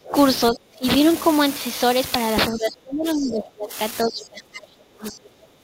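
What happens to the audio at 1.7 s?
At 1.7 s you're hearing the unreliable data bit that runs through the whole clip. One data line is flaky, so its bit flips in a random scattering of samples, each flip a same-sized spike. It comes across as a constant crackly fizz that carries right through the pauses in the speech too.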